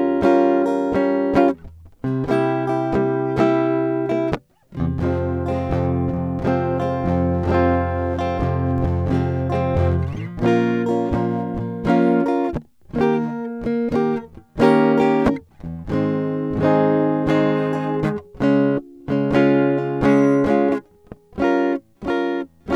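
At 8.78 s there's a DC step: the music's zero line suddenly jumps by about -29 dBFS, so you get a single low thump or click. The offset then drains away slowly, like a 2 Hz high-pass letting it decay, while the music carries on untouched.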